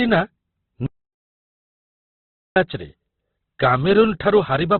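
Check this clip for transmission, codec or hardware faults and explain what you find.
Two faults stand out: heavy codec damage across the whole speech clip, and a long stretch of dead silence near the start.

Opus compression: From beginning to end the speech sounds boxed-in and muffled, with nothing above about 4.4 kHz, and what remains has a rough, grainy texture. This is likely Opus running in its music (CELT) mode at a very low rate, which fits a bitrate around 12 kbps. Starved of bits, the encoder narrows the band and fills the thin bands it keeps with folded or noise-like content, so clean detail turns coarse.

Audio dropout to silence: From 0.86 s to 2.56 s, about 1.7 s, the speech cuts out and the gap is silent, with no room tone beneath it, before the audio resumes mid-flow. The likely cause is that the input was lost for that stretch, through a dropped link, device disconnect or accidental mute, while recording carried on writing silence. 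Whatever was spoken during the gap is gone.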